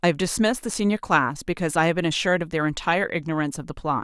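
Nothing goes wrong anywhere in this speech recording, so there's no technical fault to point to at any moment along the way.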